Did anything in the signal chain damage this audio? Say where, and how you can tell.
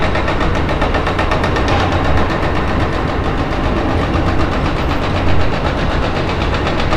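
No, nothing in the signal chain damaged this audio.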